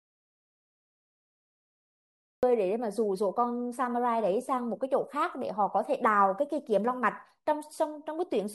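From the very start until 2.43 s the speech is absent in an audio dropout to silence: the input was likely lost while recording continued, writing silence. Unlike a quiet pause or noise gate, no room tone remains, and the sound enters abruptly mid-flow.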